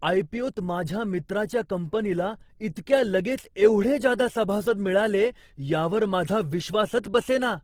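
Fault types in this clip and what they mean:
Opus compression: The speech sounds rough, grainy and noisy throughout, with plainly audible damage but few swirling holes. Each band keeps its energy, and starved bands get filled with folded or noisy content. This likely comes from Opus in CELT mode, fitting about 16 kbps, fullband.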